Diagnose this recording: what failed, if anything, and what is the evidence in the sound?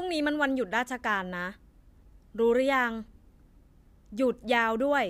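No faults detected in this recording.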